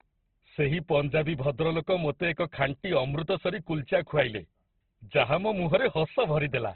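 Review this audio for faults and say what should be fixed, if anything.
The speech is band-limited throughout, with nothing above 4.3 kHz. It sounds rough and grainy, and tones come across noisy instead of clean. The damage is heavy. The likely cause is Opus compression at a narrowband setting, which fits a bitrate near 12 kbps. Re-encode from the original source at a much higher bitrate so the full bandwidth is kept.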